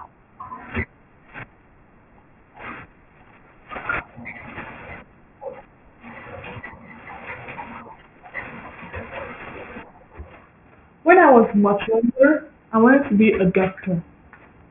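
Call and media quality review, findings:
Aliasing, whole clip: speech sibilants gritty and metallic, spectrum packed hard against a 3 kHz edge. Fits a downsample to 6 kHz without anti-alias filtering in the resampler. Content above 3 kHz folds back as unrelated tones, roughly 20 dB below signal.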